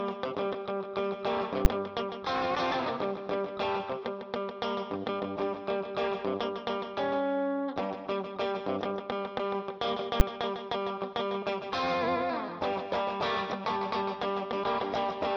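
At 1.65 s and again at 10.2 s, a calculation in the processing chain produced infinite or invalid numbers, which were clamped to the largest value the format can hold. Each time the output locks at full scale for a block of 10 ms. With so short a block, the pop that marks its start and the one that marks its end fuse into a single hard bang that cuts over the sound. These are the two invalid numbers at full scale events.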